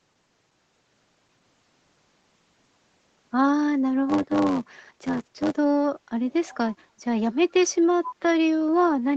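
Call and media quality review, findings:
Echo leak: faint delayed repeat of speech, about 236 ms behind, at 6.30–6.57 s, barely audible at 7.50–7.54 s, clearly louder at 8.05–8.14 s. Likely far-end loudspeaker pickup not fully cancelled by the echo canceller, residue returned into the call.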